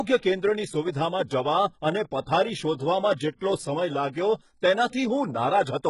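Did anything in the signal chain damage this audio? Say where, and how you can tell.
Yes, at the codec stage. Throughout the speech the spectrum stops dead at about 11.1 kHz, and the treble below that edge sounds synthetic: sibilants come out gritty and metallic rather than crisp, and the damage is heavy. That points to HE-AAC compression, likely at a very low bitrate around 12 kbps. Spectral band replication rebuilds the upper band by copying lower bands upward under a coarse envelope, so the high harmonics no longer line up with the ones beneath them.

Pre-echo from the same codec appears twice. A short hiss runs ahead of an attack from 3.16 to 3.19 s, spread over about 31 ms, and again from 3.36 to 3.41 s, spread over about 54 ms. Both onsets sound softened. The encoder spreads quantisation noise evenly across each transform block. When a sharp attack lands late in a block, noise sized for the loud part also fills the quiet stretch just before it, leaving an audible smear that runs ahead of the transient.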